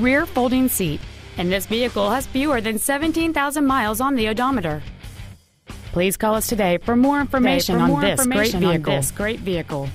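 At 7.42 s a doubled audio track appears and runs to the end. A second copy of the same sound enters abruptly, trailing the original by about a second. It sits a few decibels below the original and covers the full frequency range. It has no decay and no room colour, so it sounds like a clean replay, not an echo. The likely cause is the same signal being captured twice, once through a slower path.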